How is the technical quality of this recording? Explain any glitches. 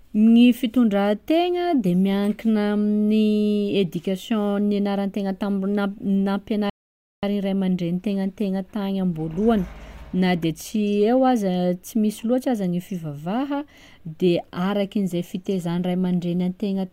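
The recording carries one clear glitch: a rebuffering stall. From 6.70 s to 7.23 s the speech drops to silence because the player exhausted its downloaded audio and waited for more. Playback then resumes at the exact point it stopped, on "ray amandreny". Nothing is skipped, but about 0.53 s of dead air is inserted.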